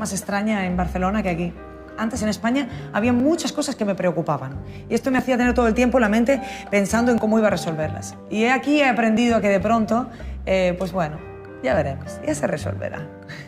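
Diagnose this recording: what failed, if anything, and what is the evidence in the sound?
Overlap between stream segments at the delivery/playback stage: there are tiny skips at 3.20, 5.19, 7.18 and 9.17 s, spaced about 2 s apart, matching 2.0 s segments. Overlapping timestamps make the player trim roughly 15 ms of real audio at each boundary, so the waveform jumps.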